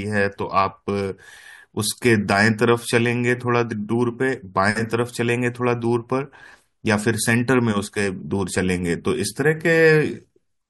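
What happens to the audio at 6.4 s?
Nothing goes wrong at 6.4 s: the speech carries on intact through that moment, with no dropout, click or distortion.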